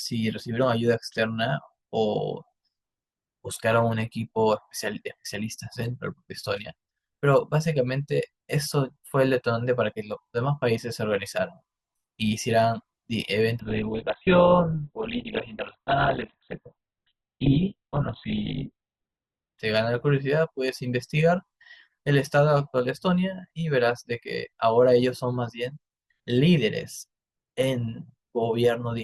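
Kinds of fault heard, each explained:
Adaptive stream at a lower bitrate: from 13.60 to 19.60 s the speech suddenly loses everything above 4.2 kHz and grows smeared, with no gap, because the player switched to a far leaner version, which fits a very low Opus bitrate, then switched back.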